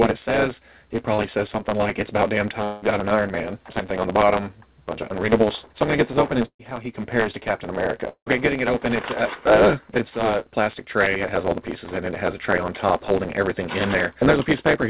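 Throughout, a block size mismatch discards the end of each block. A steady 109 Hz buzz results, and the audio runs 1.09 times fast at near-normal pitch, with regular vertical seams on a spectrogram.

At 1.14 s and 5.08 s, short concealed packet loss fills 40 ms and 15 ms gaps with continued sound. Each is a brief smear or wobble, and the spectrogram shows a short, blurred patch.

From 2.64 to 2.84 s, the sound is carried on as a fading continuation of the last sound for about 180 ms, likely a long network dropout. A fading buzz or hiss appears without any silent gap, and the audio resumes further on.

From 6.45 to 6.61 s, a burst of packet loss is filled with a decaying continuation of the last sound. The waveform shows that fill tapering away, with about 80 ms of near-silence before the audio returns with the missing part gone.

At 8.09 to 8.28 s, a similar gap, likely a long network dropout, holds the last sound and fades it out. 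About 90 ms of near-silence is visible before the audio resumes. Over the whole clip, nothing appears above 4 kHz, which fits a G.711 A-law call path at 64 kbps.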